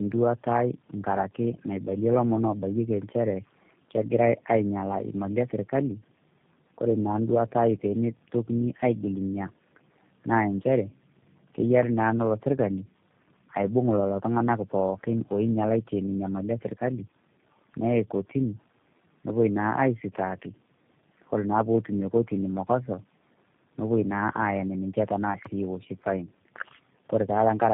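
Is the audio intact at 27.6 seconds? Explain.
No. Tandem speech coding runs through the whole clip, including 27.6 s. The audio sounds like it passed through three speech coders in a row, each re-coding the last one's degraded output. It comes out rough, muffled and warbly, with nothing above 3.7 kHz.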